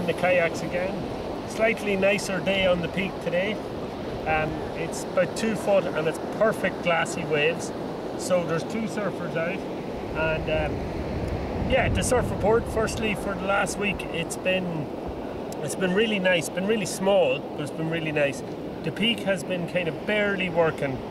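A single sharp click sits at 7.52 s in this audio, the mark of dropped samples. It is most likely one missing sample, so the waveform leaps straight to a later value and the spectrum shows a thin vertical line. Nothing audible is removed; the loss is far too short. That separates it from a dropout, where a stretch of sound goes missing and a gap or stutter can be heard around the click.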